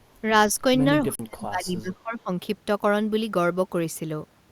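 From 1.05 to 2.31 s, the echo canceller likely mistook overlapping talk for loudspeaker echo, producing speech suppressed in double talk. It turned the talker down along with the echo. For about a second in total, the speech dips and breaks up, sinking by about 25 dB at its deepest.

Inside that stretch, at 1.15 to 1.19 s, a Bluetooth stall is likely: delayed packets left the headphone buffer empty and playback halted. The sound drops to 40 ms of silence, then resumes where it left off.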